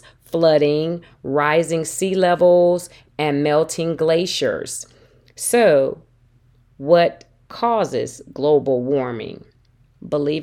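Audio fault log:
Nothing stood out on listening to this speech recording.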